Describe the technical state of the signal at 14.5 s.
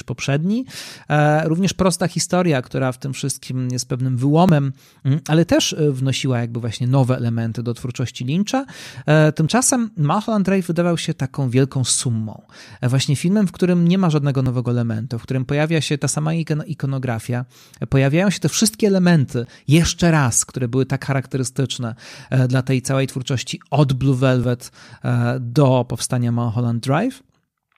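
Audio missing between chunks at 14.46 s: the speech jumps ahead, losing roughly 15 ms, and the two sides are joined directly with no silence between them. This likely comes from processing in 5-second chunks, with a sliver dropped at the handover.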